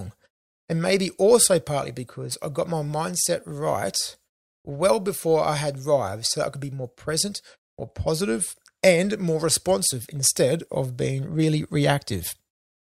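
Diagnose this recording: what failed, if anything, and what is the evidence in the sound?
Nothing failed in this recording; no stage from the wiring through to playback leaves any audible fault in the speech. There is no dropout, glitch or distortion anywhere in the sound to point to a breakdown.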